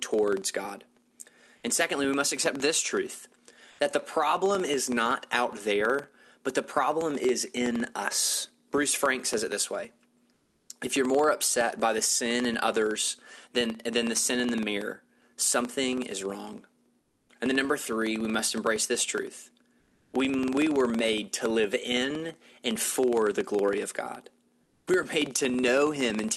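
A filter restarted on every block, losing its state and beginning each block from silence. Throughout the speech this puts a small transient at every block boundary, a buzz near 21.5 Hz that fits a 2048-sample block and tracks the level. At 3.71, 10.33, 17.01, 19.79 and 24.63 s the sender likely stopped transmitting under Opus DTX, and the pauses, 80 to 360 ms long, were filled with comfort noise in place of the background: a smoother noise, mostly about 6 to 9 dB quieter.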